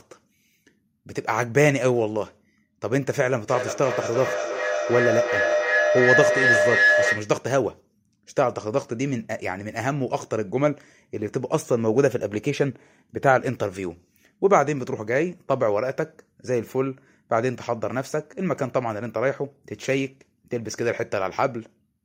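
From 3.48 to 7.41 s there's a feedback howl: the mic-to-speaker loop gains level each pass, so repeats about 0.3 s apart swell into a tone around 1.5 kHz, peaking about 3 dB above the speech.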